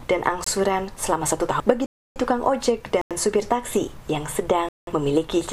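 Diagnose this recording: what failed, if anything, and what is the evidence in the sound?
The output buffer failed, leaving four blocks of digital silence. The sound drops out and returns abruptly at 0.44 to 0.46 s, 1.86 to 2.16 s, 3.01 to 3.11 s and 4.69 to 4.87 s. There is no fade. The first gap, 22 ms long, is the shortest. The others, at 93, 186 and 299 ms, are audible holes. The 93 ms and 186 ms gaps fit 4096- and 8192-sample blocks. The program did not fill the buffer in time.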